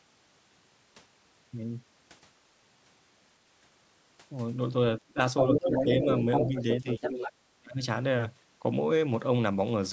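When both ends of the call were talking at once, the echo canceller likely could not tell the near talker from the loudspeaker echo, so it turned the speech down. This speech suppressed in double talk first appears as a short dip of about 15 dB from 5.12 to 5.17 s. A shallower dip of about 5 dB follows between 5.5 and 6.08 s, then a deeper one of about 10 dB from 6.48 to 7.02 s. The worst is from 7.52 to 7.82 s, where the voice falls by about 35 dB and nearly vanishes.

The same canceller likely also failed to strip the far end's playback from the microphone signal, so the other side's voice leaking through can be heard. From 5.37 to 6.63 s that second voice sits at roughly the same level as the talker, overlapping the weaker dips. It returns from 6.79 to 7.32 s, a little quieter, and runs across the end of the 10 dB dip.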